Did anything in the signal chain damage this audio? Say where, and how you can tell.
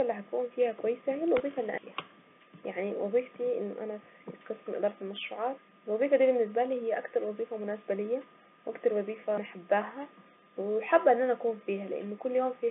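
Yes. The network stage dropped audio at 1.38 to 1.40 s, just after "هكون فيها كويسة هي". About 20 ms went missing. The receiver bridged it by repeating the last pitch period. This is packet loss with pitch repetition. The gap is short, so there is no fade to silence. Instead the voice briefly holds on a slightly buzzy, frozen tone. The 20 ms loss fits two 10 ms packets.

Audio is also missing between chunks, at 1.78 s and 9.38 s. The second gap falls between "وظيفة مناسبة لي واكتر" and "احباها وحابة". Each time, something like a fifth of a second vanishes. The two sides are butted together with no silence, so the speech jumps abruptly. The likely cause is a recorder or processing buffer that works in fixed chunks and loses a slice each time it closes one chunk and opens the next.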